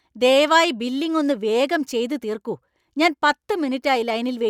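No technical faults are audible anywhere in the recording.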